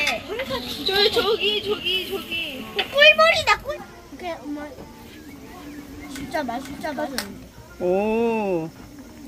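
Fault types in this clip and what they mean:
Doubled audio track: from 5.46 to 7.24 s a second full-band copy of the sound runs about half a second behind, a few dB quieter, with no decay or room colour, cutting in and out abruptly; likely a slower capture path or an edit holding two out-of-step copies.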